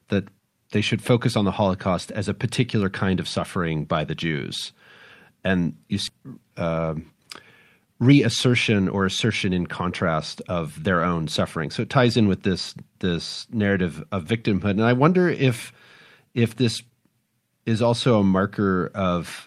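At 6.07 s, right after "and you", the speech jumps straight to later material with no gap, a skip ahead losing roughly a second of audio. That stretch was dropped while later packets were already queued, so the two sides join almost directly.

Next comes a jitter buffer speed-up in three bursts: 6.17 to 7.29 s at 112%, 7.79 to 11.20 s at 108%, and 11.65 to 12.38 s at 106%, ending just before "this this narrative of". The speech sounds hurried at unchanged pitch because the receiver, holding excess audio, repeatedly trimmed pitch-period pieces, around half a second in all.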